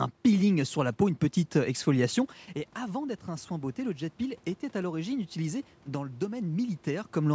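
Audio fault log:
2.79–7.18 s, automatic gain rising: after the input level fell by about 11 dB, the gain control climbed about 5 dB gradually, so voice and background swell together.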